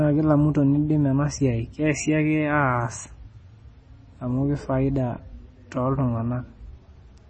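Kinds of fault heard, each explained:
MP3 compression: nothing above 8.4 kHz, with heavy watery, swirling flicker, likely a 24 kbps-class encode; a low-pass alone would cut treble without that swirl.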